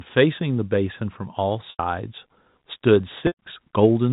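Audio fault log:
1.70 to 1.79 s and 3.27 to 3.36 s: packet loss with pitch repetition. Audio goes missing for about 90 ms, then about 120 ms. Each gap fits a run of 10 ms packets. The receiver fills it by repeating the last pitch period, so the sound holds on one steady buzzy tone. That repeat fades out over roughly 50 ms, leaving brief silence in each gap. A short cross-fade then brings the live signal back. The speech carries the narrow telephone band of the G.711 coding.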